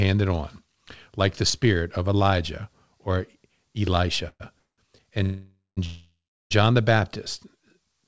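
Four call audio freezes interrupt the speech, at 4.28–4.42 s, 4.60–4.80 s, 5.24–5.79 s and 5.85–6.53 s. Each is likely a jitter buffer running dry while packets were delayed. The last sound is stretched into a fading buzz, then true silence of 50, 150, 190 and 370 ms, before speech resumes where it stopped. On a waveform these appear as decaying smears ending in flat gaps. A spectrogram shows smeared, repeated bands under the call path's 8 kHz ceiling, then blank columns.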